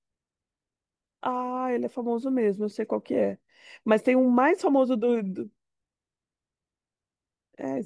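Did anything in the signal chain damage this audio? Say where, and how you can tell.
No, nothing in this speech recording stood out on listening as damage from any stage of the signal chain.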